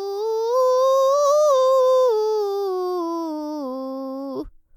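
Music clip with no technical faults to report.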